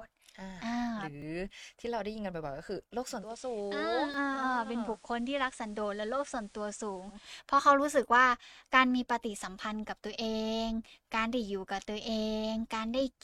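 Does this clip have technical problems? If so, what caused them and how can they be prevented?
Yes. At 1.22 s and 4.14 s the sound skips ahead, losing roughly 30 ms and 10 ms. This is likely a dropped buffer (overrun). Giving the capture thread higher priority or a larger buffer prevents it.

From 3.08 s to 7.34 s the digital radio is blending to analogue FM. Over 284 ms, hiss rises to about 25 dB below the speech and level drops about 5 dB. Better antenna placement keeps the digital signal locked.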